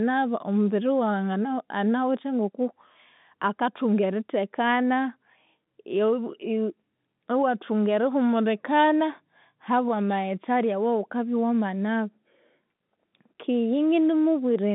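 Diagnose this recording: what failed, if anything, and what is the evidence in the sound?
Nothing has failed: the speech carries the narrow band of G.711 mu-law telephone coding, roughly 150 Hz to 3.7 kHz with nothing above 3.8 kHz, which fits a 64 kbps line, and its faint level-following quantisation hiss is the format's own signature rather than damage.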